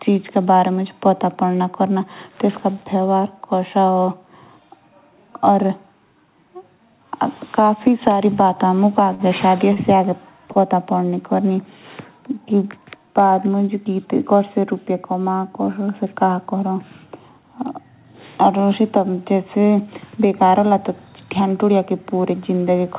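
Speech over a call path band-limited at 4 kHz has three short stalls from a late packet, at 9.14, 9.73 and 10.52 s. Each time the jitter buffer ran empty, and the receiver stretched the last sound for 53, 30 and 34 ms until the packet arrived. It then resumed from the same point, so nothing is lost, but the sound hangs briefly with a faint buzz or dip.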